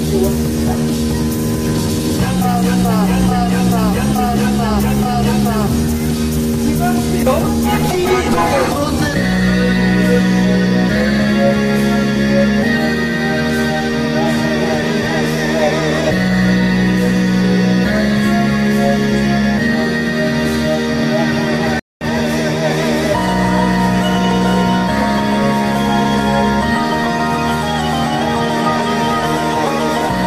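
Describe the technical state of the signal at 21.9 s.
At 21.9 s the signal is inside a stream reconnect that runs from 21.79 to 22.04 s. The connection dropped, playback went silent for about 0.22 s, and a fresh decoder picked the stream up again mid-flow. Unlike a plain dropout, where the sound continues from where it stopped, the audio here resumes roughly 0.15 s further along, so a short stretch of material is skipped outright, and the restart sounds like a cold start rather than a simple gap.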